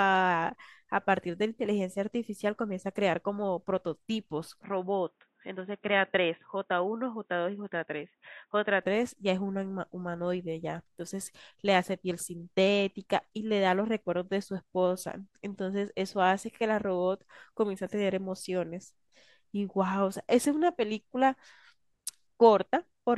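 From 4.64 to 8.83 s the speech turns dull and boxy, with nothing above 3.8 kHz, then clears again. That's likely an input switched to a poorer device. There's no gap at either switch and the level stays roughly the same, just a faint new noise floor underneath.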